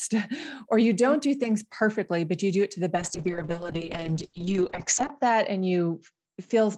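A call bitrate drop begins at 2.96 s and lasts to the end. The encoder starves, highs vanish above 8 kHz, and speech turns rough, which fits roughly 7 kbps.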